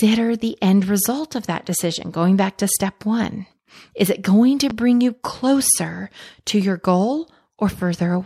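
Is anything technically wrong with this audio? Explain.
Yes, there's a single loud pop in the speech at 4.70 to 4.73 s, peaking a few dB above the voice. It's likely a voltage spike from a plug, switch or static hitting the signal chain, heard as a sharp thump while the speech continues underneath.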